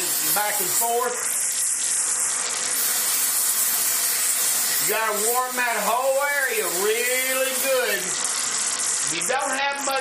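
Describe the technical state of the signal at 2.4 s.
At 2.4 s the audio is inside a Bluetooth SBC bit pool drop running from 1.05 to 2.76 s. The dulled treble and gritty noise fit the bit pool falling from 31 to 7, around 61 kbps: upper sub-bands lose their bits and the remainder is coarsely quantised.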